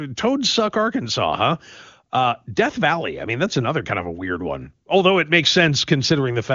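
No faults can be heard in the signal, which carries AMR wideband (HD Voice) coding with its band ending near 7.2 kHz and little or no audible codec damage, consistent with the codec's top rate of 23.85 kbit/s.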